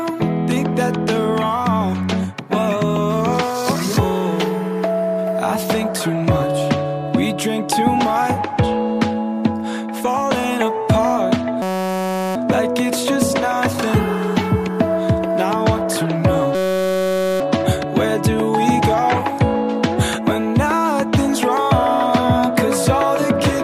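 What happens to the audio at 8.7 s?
Nothing goes wrong at 8.7 s; the audio plays through that moment intact, with no dropout, click, distortion or other fault to be heard.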